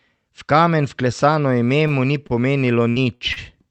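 A speech recording carried over a call path, with the sound topping out around 8 kHz as the Opus-style codec limits the band, contains two short holds and one choppy passage. At 1.87–1.95 s, right after "kamen vklesano ime" and before "mu ni", a sound lingers unnaturally with a faint buzz or dip. At 2.27–2.33 s, after "vklesano ime mu ni", it happens again. Both are a short stall from a late packet: the jitter buffer ran dry, and the receiver stretched the last sound by roughly 26 ms and 30 ms until the packet arrived, then resumed with nothing lost. From 2.90 to 3.39 s the speech turns broken, with bits dropping out. This is repeated packet loss (robotic sound): four gaps in quick succession, the longest 63 ms, each patched by extending the previous sound. About a third of that span is concealed, and around 120 ms of speech is simply missing.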